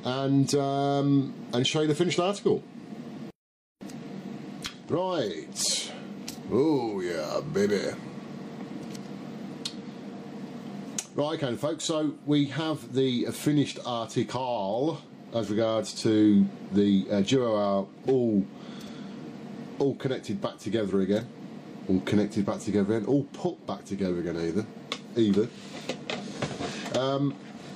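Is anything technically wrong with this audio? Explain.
No, the signal shows no technical faults anywhere in the recording.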